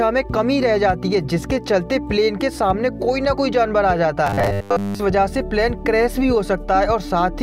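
From 4.27 to 5.00 s the sound turns into a rigid, metallic buzz pinned at 100 Hz, still loosely tracing the shape of the audio but stripped of its natural movement. This is robotic sound from repeated short buffers, most likely caused by new audio arriving too seldom, so the last fragment, about 10 ms long to match that 100 Hz buzz, is replayed over and over while most of the real material in that stretch is skipped.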